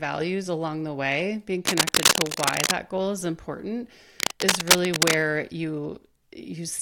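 Speech with cable scratch noise at 1.65–2.72 s and 4.20–5.14 s: dense, uneven rustling bursts about 5 dB above the voice, not isolated clicks, likely from a worn connector being moved.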